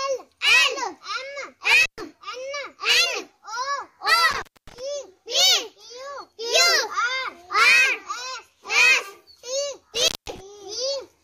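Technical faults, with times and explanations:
1.83–2.01 s, 4.31–4.80 s, 9.95–10.40 s: intermittent contact. A loose connection opens for about 120, 240 and 190 ms. The sound drops out, with crackle at each edge.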